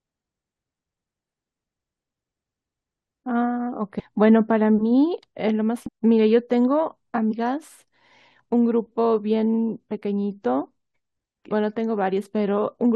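Damaged data in a compressed stream hits this speech at 0.52 s, 3.98–4.01 s, 5.86–5.89 s, 7.30–7.33 s and 11.51 s, with corrupted frames causing brief glitches as the decoder loses sync and hunts for the next header.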